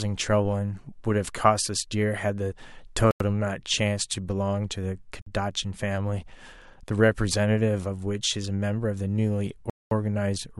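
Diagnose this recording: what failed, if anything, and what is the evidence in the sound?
The wireless playback link most likely suffered a Bluetooth stall: delayed packets let the headphone buffer run dry, so output halted until retransmissions arrived. The speech cuts to silence at 3.11–3.21 s, 5.22–5.26 s and 9.70–9.91 s, gaps of 93, 49 and 214 ms, then resumes.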